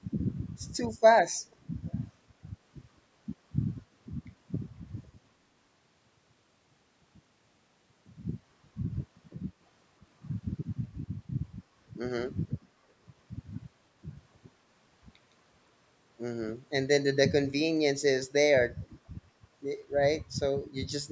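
Echo leak at 1.43 to 1.56 s and again at 1.86 to 1.96 s: brief, very faint scraps of the voice return about 495 ms late, likely from a far-end loudspeaker whose echo canceller let part of the microphone pickup slip back into the call.

Zipper noise from 8.09 to 8.47 s: while the level moves by around 20 dB, it changes in coarse unsmoothed steps, about a hundred per second, and each jump leaves a tiny click, so a fine ticking buzz rides on the sound.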